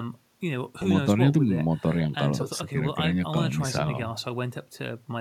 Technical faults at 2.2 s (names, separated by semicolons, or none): none